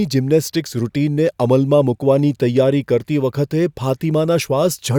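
No technical faults are audible anywhere in this recording.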